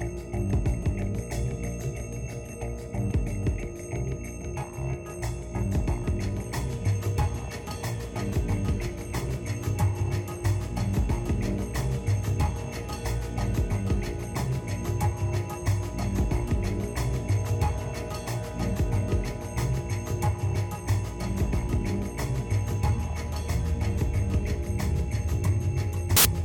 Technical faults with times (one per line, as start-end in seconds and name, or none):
26.17-26.25 file tags played as audio